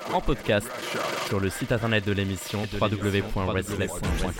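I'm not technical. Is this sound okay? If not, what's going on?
No. From 2.64 s to the end, the audio was likely captured twice, causing a doubled audio track: a quieter copy repeats everything about 0.7 seconds late.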